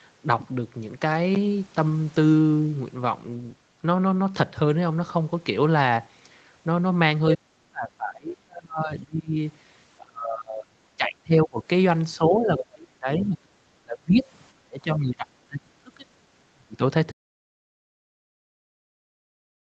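Speech in which the talker is repeatedly pushed down from 7.36 to 9.37 s, 9.98 to 10.81 s, 10.97 to 11.6 s, 12.18 to 14.27 s, 14.55 to 16.09 s and 16.53 to 16.81 s, with dips reaching roughly 30 to 40 dB, some lasting around two seconds. This is likely speech suppressed in double talk: with both ends talking, the echo canceller treated the near voice as loudspeaker echo and attenuated it. At about 12.6 s a brief scrap of another voice, roughly 10 dB below the talker, comes through, pointing to the other side's voice leaking through as residual echo the canceller missed. From 17.12 s to the end the signal drops to silence with no room tone, an audio dropout to silence, likely from the input being lost while the recording continued. Throughout, the band stops near 8 kHz, as expected from the call path.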